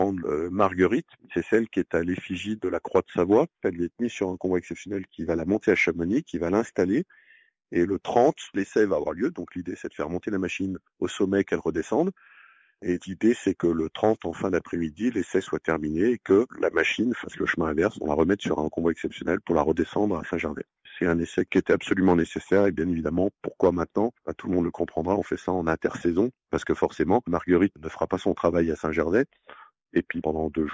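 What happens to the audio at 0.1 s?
Nothing goes wrong at 0.1 s; the audio plays through that moment intact, with no dropout, click or distortion.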